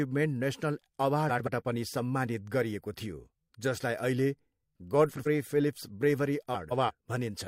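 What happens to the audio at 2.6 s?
Nothing goes wrong at 2.6 s; the speech carries straight through that moment with no dropout, click, distortion or other audible fault.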